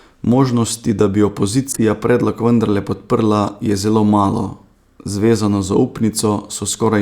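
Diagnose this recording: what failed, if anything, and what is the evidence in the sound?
The codec stage failed: a corrupt frame was decoded in two places in this speech. From 1.72 to 1.80 s a loud burst of misplaced energy, peaking around -5 dBFS, spans several consecutive frames. At 3.47 s a shorter, quieter blip covers a few frames. Damaged bits gave the decoder wrong gains and codes, so it played energy at the wrong frequencies. The burst has spectral content, unlike a click.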